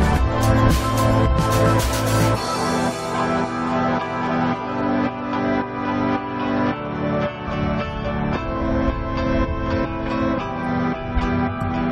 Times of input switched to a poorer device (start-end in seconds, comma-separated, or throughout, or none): none